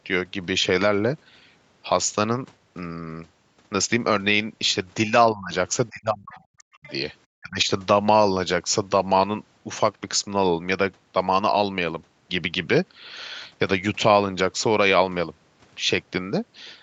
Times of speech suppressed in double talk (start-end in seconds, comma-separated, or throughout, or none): 5.07-5.53, 5.90-6.87, 7.38-7.68